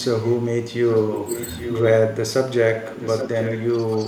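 Speech dips at 0.00–0.04 s and 0.63–0.94 s, by about 15 dB at worst, likely speech suppressed in double talk as the echo canceller ducked its own talker along with the echo. From 0.96–1.82 s and 2.74–3.64 s, an echo leak returns a copy about 10 dB down, 834 ms late, likely from residual loudspeaker pickup. A slight dip recurs at 3.97–4.07 s.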